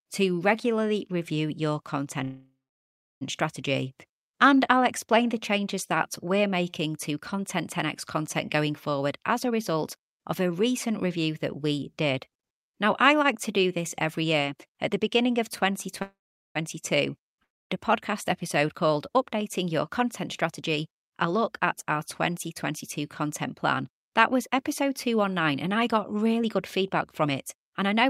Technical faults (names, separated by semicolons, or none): call audio freeze; jitter buffer speed-up; long network dropout